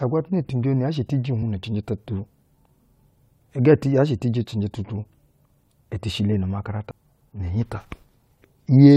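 At 6.90 s the speech is broken by a short glitch lasting only about 12 ms, the mark of damaged data in a compressed stream. Part of the encoded stream was corrupted at that point, so the decoder could not read the affected frame correctly, lost synchronisation and resumed at the next valid frame header. The result is a brief disturbance in the speech.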